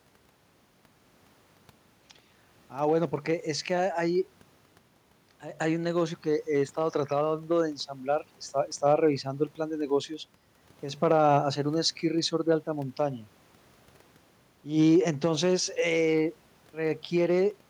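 No dropouts, clicks, distortion or other playback faults are audible anywhere in the recording.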